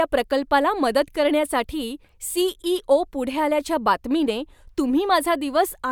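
No technical faults can be heard anywhere in it.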